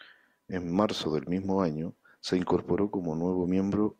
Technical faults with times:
none

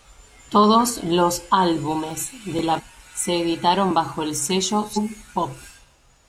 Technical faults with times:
1.86-3.01 CD scratch ticks
2.74-2.81 damaged data in a compressed stream
4.93-4.98 damaged data in a compressed stream

